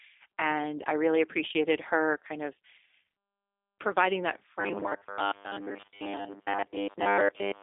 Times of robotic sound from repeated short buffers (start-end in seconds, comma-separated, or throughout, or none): 4.61-7.63